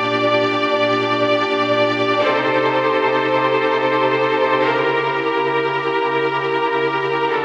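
There are no technical faults to describe in the audio, so there is nothing to place in time order.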